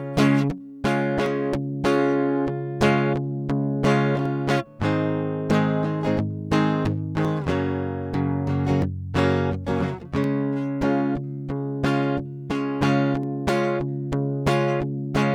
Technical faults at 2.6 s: none

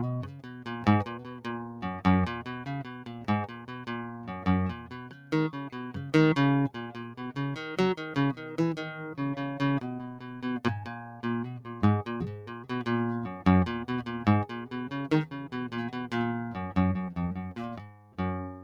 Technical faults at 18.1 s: noise suppressor applied to music or sounds; sound cut by the noise suppressor

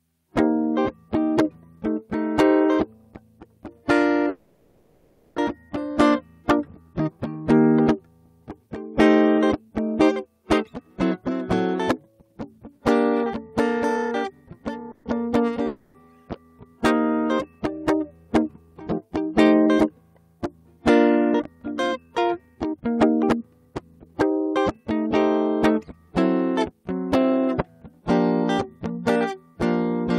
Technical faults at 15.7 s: long network dropout

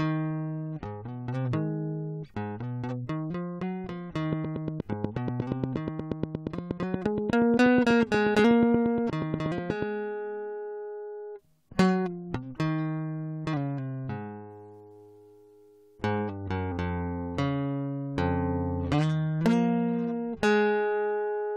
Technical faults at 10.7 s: none

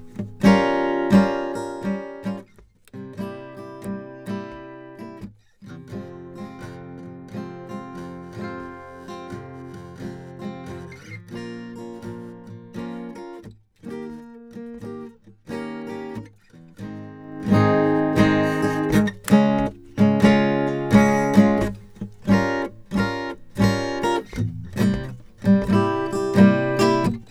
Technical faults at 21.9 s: none

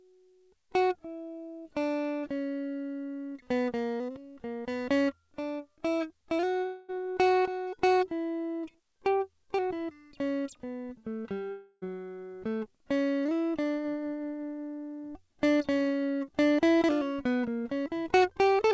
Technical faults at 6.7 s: long network dropout

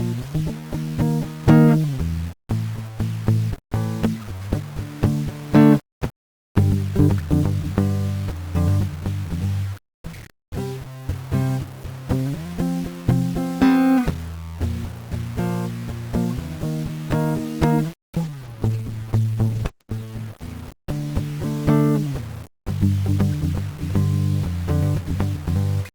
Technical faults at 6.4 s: low bit depth without dither

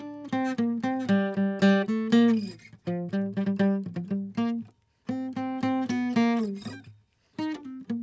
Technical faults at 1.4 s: none

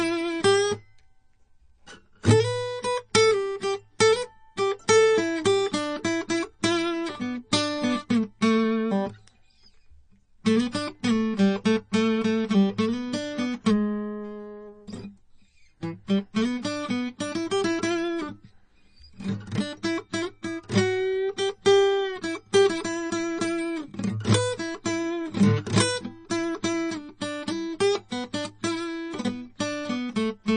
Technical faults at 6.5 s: MP3 compression

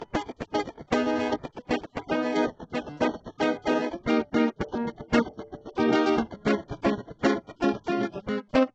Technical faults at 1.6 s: HE-AAC compression

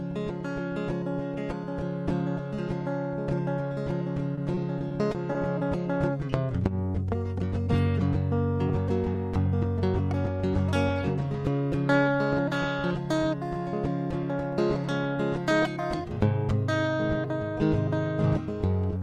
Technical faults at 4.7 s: repeated packet loss (robotic sound)

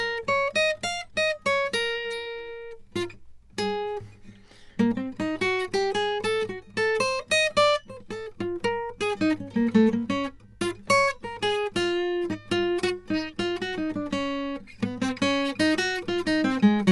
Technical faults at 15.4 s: Dolby Digital compression

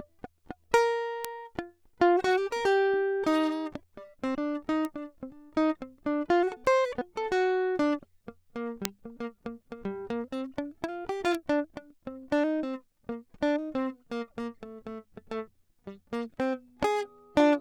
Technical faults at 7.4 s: none

